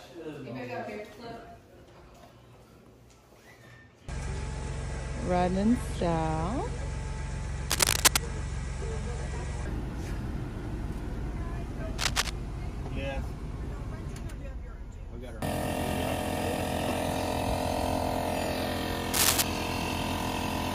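Cable scratch noise bursts in at 7.70–8.24 s, 11.98–12.29 s and 19.14–19.42 s. It is dense, uneven rustling, louder than the sound at first and last, about level mid-clip. A worn, moving connector is the likely cause.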